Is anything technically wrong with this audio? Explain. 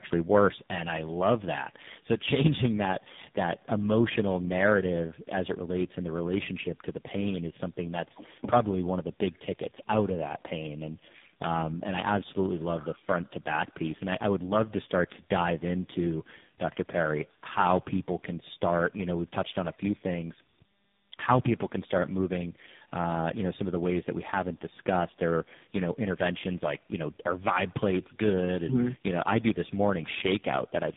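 Yes. Throughout, the speech sounds rough, muffled and warbly, with nothing above about 4 kHz. This is tandem speech coding: the call passed through three speech codecs in a row (G.726, GSM full rate, then AMR-NB), and each one re-coded the previous coder's already degraded output, so the damage compounds.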